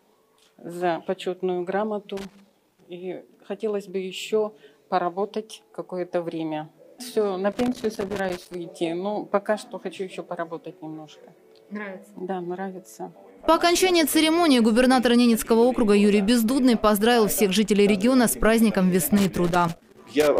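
Loose connector crackle breaks in three times: 2.17 to 2.82 s, 7.52 to 8.54 s, and 19.18 to 20.39 s. A worn or dirty contact is making and breaking as it shifts. The sound chops apart into irregular scratchy bursts.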